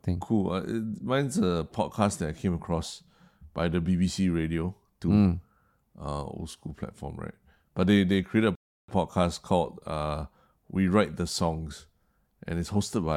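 At 8.55 s the speech halts and silence holds until 8.88 s, a rebuffering stall that adds about 0.33 s to the clip. The player ran short of downloaded audio and simply waited for more before carrying on. What separates it from a dropout or packet loss is that nothing is skipped: the speech picks up at exactly the point where it broke off, so the gap only lengthens the timeline.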